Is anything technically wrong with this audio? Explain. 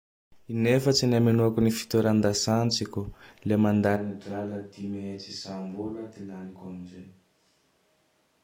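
Yes. At 3.98 s the recording switches to a distant microphone and stays on it to the end. The close microphone's feed most likely dropped out, leaving only a pickup further away, such as a camera microphone. Because that microphone hears more of the room than of the speaker, the speech suddenly turns hollow and reverberant, loses bass, falls roughly 10 dB in level, and sits over audible room noise only about 35 dB below it.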